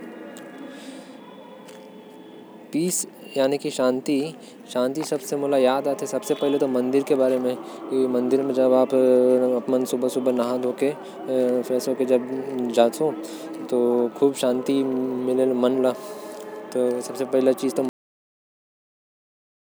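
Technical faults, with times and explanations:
17.89 s, cut-off end: the speech stops dead partway through a sound, with no natural tail or decay, and everything after that point is flat digital silence until the clip ends about 1.8 s later. What's happened is that the final stretch of audio never got written out or played back, so the last buffers are simply missing. That's why it reads as an abrupt chop rather than the speaker finishing and going quiet.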